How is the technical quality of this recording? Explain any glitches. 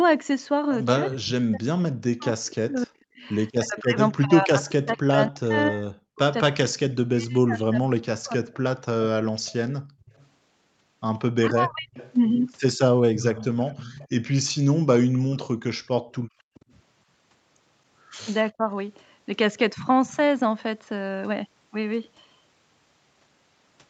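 The recording has clear call-processing faults between about 1 and 19 s, and nothing above 8 kHz comes through, which fits a wideband Opus call path.

Speech suppressed in double talk: from 0.99 to 11.94 s the speech repeatedly dips, at worst by about 40 dB, for around seven seconds in total, and again from 18.47 to 18.73 s by about 25 dB. This is likely an echo canceller that could not separate talker from loudspeaker echo and turned both down.

Echo leak: from 1.09 to 3.79 s and from 9.46 to 16.74 s, a faint delayed copy of the speech trails 263 ms behind, about 15 dB quieter. The likely cause is a loudspeaker's echo that the far end's canceller did not fully remove and sent back.

Background gated by the echo canceller: from 9.81 to 10.06 s and from 16.2 to 16.54 s, the room sound briefly drops by about 31 dB, because the canceller clamped the microphone while the loudspeaker played.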